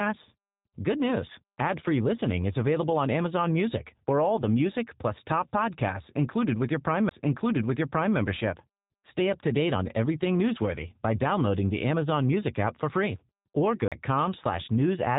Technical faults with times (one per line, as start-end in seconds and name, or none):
0.00-15.18 G.729 codec
7.09 CD skip
13.88-13.92 CD skip